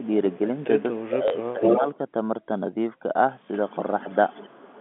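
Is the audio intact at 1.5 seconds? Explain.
No. From 1.06 to 1.86 s the speech is suppressed in double talk. It dips by up to about 15 dB, likely because the echo canceller muted both overlapping talkers. From 1.45 to 1.98 s there is an echo leak. A copy of the speech returns 253 ms late, about 5 dB above it, likely leftover loudspeaker pickup the canceller missed.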